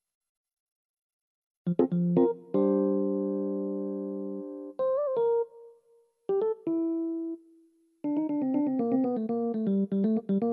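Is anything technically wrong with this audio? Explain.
No, nothing technically wrong can be heard here.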